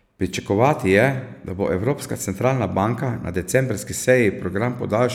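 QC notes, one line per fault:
No fault found in the speech.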